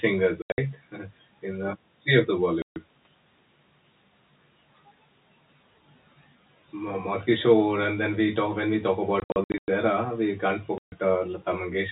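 Packet loss filled with silence breaks up the speech at 0.42–0.58 s, 2.62–2.76 s after "of the", 9.2–9.68 s after "talk when we talk", and 10.78–10.92 s after "era we can't". Missing stretches become hard-edged silent gaps in steps that fit 20 ms packets.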